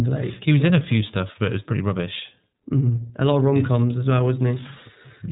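Speech runs through the iLBC codec from start to finish. Nothing above 3.8 kHz survives, so the sound is narrowband. Each 30 ms frame is coded on its own, leaving a plainly rough, synthetic texture. That fits a rate near 13.3 kbps.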